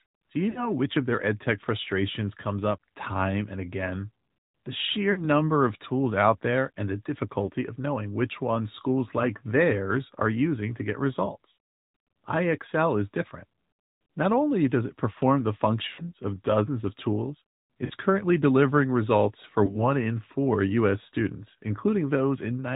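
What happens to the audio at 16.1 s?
Around 16.1 s the clip is at the end of a burst of lost AMR speech frames, spanning roughly 15.88 to 16.13 s. Radio errors corrupted a short run of frames, about 100 ms of speech, which fits five consecutive 20 ms frames failing their checksum. The decoder filled the gap by repeating the last good pitch and vocal tract settings at steadily lower gain. The sound therefore smears into a drawn-out sound that fades toward silence, then returns thin and rough just after 16.1 s.

This happens on top of the AMR narrowband mobile codec, which runs through the whole clip at a rate that fits 10.2 kbps. The codec samples at 8 kHz and rebuilds the voice from a vocal tract model driven by sparse pulses, so nothing above 4 kHz survives. At this rate the speech sounds plainly buzzy and synthetic.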